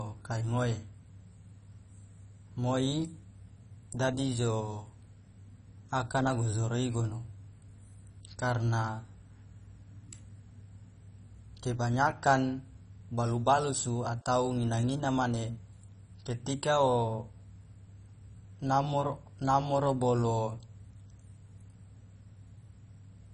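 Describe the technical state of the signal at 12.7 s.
At 12.7 s the speech carries the same damage it has throughout: a dull, band-limited sound with nothing above about 10.4 kHz, plus a gurgling, granular roughness, likely from heavy MP2 compression at a very low bitrate, around 32 kbps. Starved of bits, the encoder switches off upper sub-bands and coarsely quantises those remaining, so bands flicker in and out. That flickering grit distinguishes it from a simple low-pass filter, which would dull the sound cleanly.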